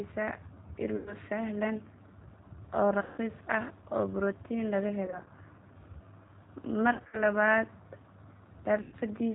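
The speech runs through the G.729 codec at 8 kbit/s throughout. It has no content above 4 kHz and a plainly rough, synthetic edge. VoIP packet loss concealed by the speech codec occurs at 0.96–1.15, 3.02–3.20, 5.06–5.28, 6.93–7.21 and 8.82–8.95 s. The decoder stretches the last sound into a fading buzzy tone or coloured noise. The losses at 5.06 and 6.93 s are scattered short gaps.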